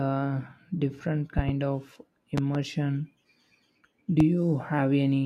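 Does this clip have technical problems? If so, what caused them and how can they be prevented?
Yes. A voltage spike, likely from a loose plug, a switch or a static discharge, entered the signal chain three times, and the circuits after it turned each spike into a loud pop over the continuing speech. There is a double pop at 1.38–1.51 s, about 10 dB above the speech, another double at 2.38–2.58 s, and a single pop at 4.20–4.23 s, both about 15 dB above it. Secure cables, ground the equipment, and mute channels before switching anything.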